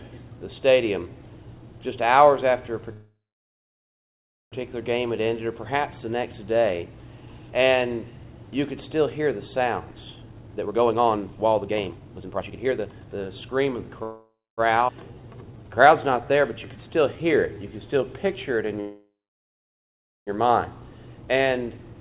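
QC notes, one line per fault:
2.93–4.55 s, 14.03–14.61 s, 18.80–20.30 s, call audio freeze: packets were likely held up in transit and the jitter buffer ran dry, so the receiver stretched the last sound into a fading buzz before going quiet. The gaps add 1.59 s, 0.54 s and 1.47 s, including about 1.36 s, 0.25 s and 1.16 s of near-silence. Playback then resumes where it stopped, with nothing lost but later timing pushed back.
10.16–13.93 s and 20.90–21.94 s, jitter buffer speed-up: the buffer had built up more audio than its target, so the receiver repeatedly cut out short pitch-period slices to drain it. The first stretch plays at 141% speed, shedding about 1.5 s, and sounds clearly rushed at unchanged pitch. The second runs at 110%, dropping only about 0.1 s, a milder hurry.
14.88–14.91 s, skip ahead: a stretch of roughly 0.3 s was discarded while later audio already sat waiting, and the two sides were spliced with only a 9 ms fill. 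The sound jumps forward almost seamlessly, so that portion is simply gone.
15.11–17.74 s, jitter buffer slow-down: the buffer was running low or had just raised its target delay, so the receiver rebuilt its reserve by repeating single pitch periods and pause fragments, adding 288 ms. Playback drops to 89% speed at the same pitch, giving drawn-out sounds, all within the G.711 call path's band limit of 4 kHz.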